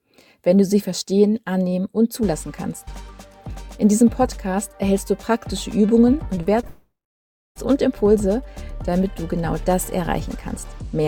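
Around 6.35 s the audio turns choppy, with short pieces dropping out until 6.68 s. This is repeated packet loss (robotic sound): four brief holes, the longest about 20 ms, were each papered over by stretching the preceding sound, which covers roughly a fifth of that stretch with synthetic fill. The trouble deepens straight into a long network dropout from 6.68 to 7.57 s, most likely from the network delivering nothing for almost 0.9 s. What is heard is the last sound smeared into a brief fading buzz or hiss, then about 0.68 s of silence, before the audio resumes with the missing portion simply gone rather than delayed.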